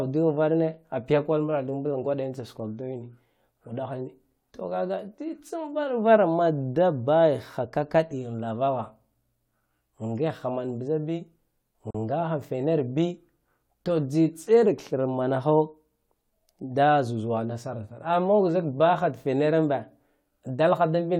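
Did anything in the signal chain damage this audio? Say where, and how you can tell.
Yes: a gap at a join of encoded pieces, from 11.91 to 11.95 s, where separately encoded segments leave about 40 ms of silence. It shows as a narrow blank column in the spectrogram, with slightly smeared edges.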